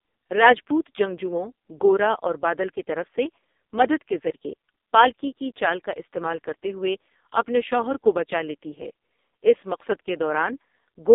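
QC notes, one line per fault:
Throughout: AMR narrowband mobile codec, heavy damage. Speech is buzzy and synthetic, band-limited to roughly 250 Hz–3.7 kHz, which fits the lowest 4.75 kbps mode.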